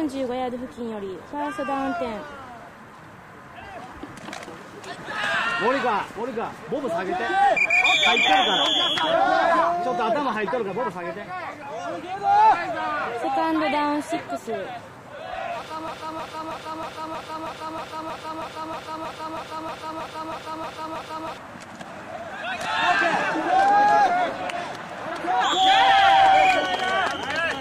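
At 15.88 s the sound locks into a broken-record loop: a 317 ms fragment repeats exactly, back to back, 17 times until 21.38 s, giving a mechanical stutter at roughly three repeats per second. Whatever should have played across those five and a half seconds is gone. A stalled player, encoder or stream resending its last buffer is the likely cause. On a waveform or spectrogram, identical blocks tile evenly, with no variation between repeats.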